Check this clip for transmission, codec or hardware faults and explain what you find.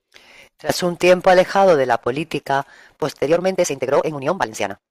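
There's one fault here, a time-stretched section from 3.23 s to the end, right after "alejado de la política": speech suddenly runs about 1.78 times faster at unchanged pitch, sounding rushed, likely from pieces being dropped.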